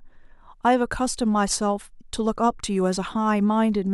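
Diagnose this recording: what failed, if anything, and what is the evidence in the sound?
The failure sits in the codec stage: damaged data in a compressed stream. It is heard as a brief glitch in the speech from 1.95 to 1.97 s, lasting about 26 ms. Some bytes in the encoded stream were lost or corrupted. The decoder misread the affected frame, lost sync, and scanned ahead for the next valid frame header. The glitch comes from that lost sync and search. Normal decoding resumes once sync is found.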